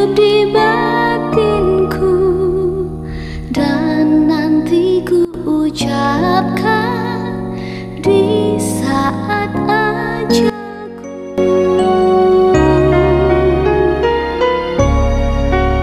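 The audio drops abruptly in level twice: from 5.25 to 5.34 s by about 17 dB, and from 10.50 to 11.38 s by about 16 dB, a sudden gain jump each time. The likely cause is a digital gain setting applied between one sample and the next with no ramp. Unlike a fade or compressor pumping, there is no gradual slope, and the background noise falls and recovers together with the sound.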